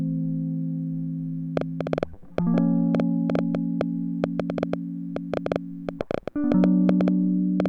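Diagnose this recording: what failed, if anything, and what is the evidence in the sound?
A train of clicks overlays the music from 1.57 to 7.67 s: some forty irregular pulses at 6.6 per second, likely interference entering analogue wiring.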